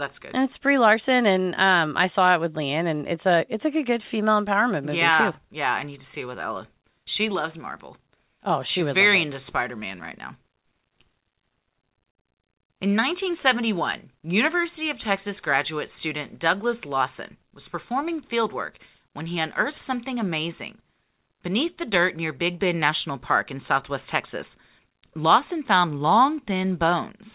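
Nothing stood out on listening to this speech, beyond the narrow telephone-band sound of a call path that carries nothing above 4 kHz.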